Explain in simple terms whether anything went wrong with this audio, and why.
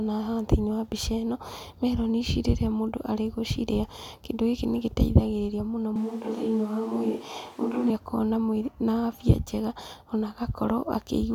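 At about 5.96 seconds the speech suddenly turns roomy and hollow, losing its warm low end, with faint background noise creeping in. At 7.90 seconds it snaps straight back to sounding close and full. That's a switch to a distant microphone: for those two seconds the recording most likely fell back on a mic further away, such as a camera's, because the close mic dropped out. The loudness stays about the same; it's the tone that gives it away.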